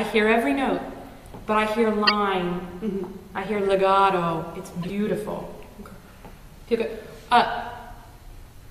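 Corrupt frame decoded at 2.05–2.11 s and 4.82–4.90 s: bit-damaged frames were played anyway, giving a loud near-full-scale burst, then a much quieter blip.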